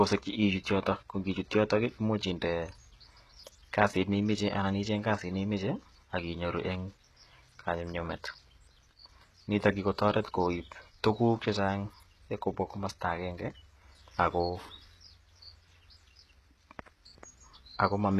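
From start to finish the speech carries plainly audible codec damage, most likely HE-AAC compression at a low rate near 16 kbps. The treble is rebuilt from copied lower bands. S sounds turn gritty and metallic. Nothing is heard above 14.8 kHz.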